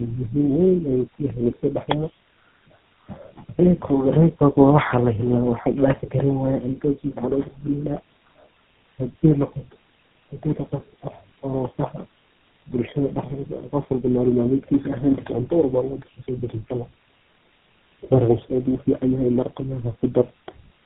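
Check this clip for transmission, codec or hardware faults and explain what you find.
One fault runs throughout: tandem speech coding. The speech sounds rough, muffled and warbly, with nothing above 3.8 kHz. The call was decoded and re-encoded at network borders, through three low-rate speech codecs in a row, consistent with GSM full rate and G.729A. Each coder compressed the previous one's degraded output, so the damage accumulated.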